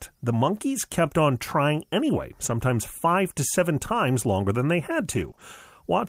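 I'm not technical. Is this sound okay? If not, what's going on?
No. The speech has brief network dropouts. Around 2.45 to 2.51 s, and just after "longer than they had" at 5.11 to 5.29 s and 5.39 to 5.41 s, you hear lost packets rebuilt from error correction. Pieces of the call went missing, but a rough backup copy arrived with the next piece. Nothing drops out, but those moments sound grainier and hissier.

From 5.31 to 5.39 s, two back-to-back short concealed packet losses occur. Unlike the spots above, there was no backup copy, so the receiver guessed by stretching the last sound. That causes a quick smear or wobble, and a short sound can disappear.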